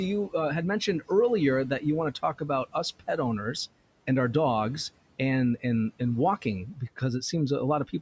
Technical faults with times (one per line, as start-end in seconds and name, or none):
6.74-7.02 speech cut by the noise suppressor